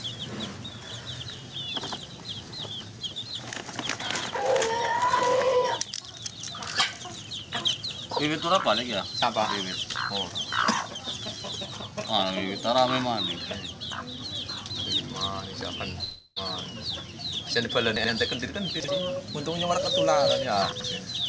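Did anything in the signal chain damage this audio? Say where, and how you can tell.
Yes. From 16.04 to 16.38 s a long network dropout leaves a gap of about 0.32 s. The last sound is stretched into a decaying buzz that covers nearly all of it, reaching silence only at the end, before the audio resumes further on. A packet loss in the network stage is the likely cause.

Chunks out of order produce three garbled moments at 17.96–18.08 s, 18.80–18.88 s and 20.72–20.84 s. Each points to a 40 ms block played one or two blocks late, so the sequence is scrambled and hard-joined at three seams. This is late delivery through the network and jitter buffer, with nothing lost. The band stopping at 8 kHz fits the G.722 call codec on this path.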